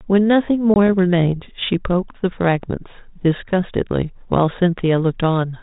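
At 0.74 to 0.76 s, packet loss on an ADPCM call leaves a hard-edged 20 ms silence, about one packet. Unlike a plain dropout, speech then resumes slightly distorted while the adaptive predictor resyncs.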